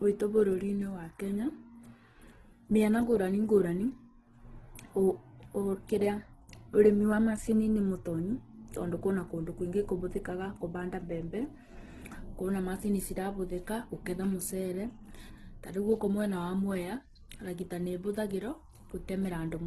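From start to finish the speech sounds rough and grainy, with a noisy, sandy texture standing in for clean detail, and nothing above 12.2 kHz. This is likely Opus compression in its music mode, with damage this heavy pointing to a bitrate around 12 kbps.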